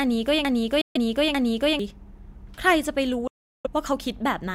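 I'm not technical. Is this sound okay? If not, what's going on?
No. Two different problems can be heard.

From the very start until about 1.79 s, there's a broken-record loop: a snippet roughly 0.45 s long plays over and over, back to back, already repeating when the clip begins. Whatever should have been heard in that stretch is missing. What gives it away is exact repetition: the same piece returns identically each time, which most likely means the player or stream stalled and kept resending the last bit it held.

There are also two Bluetooth dropouts, where the sound cuts to silence. The first runs from 0.81 to 0.97 s, about 0.14 s, and the second from 3.27 to 3.67 s, about 0.37 s. Unlike the loop, nothing repeats. The audio simply vanishes and then comes back further along, as if it kept playing during the gap, which points to packets likely failing to reach the headphones in time.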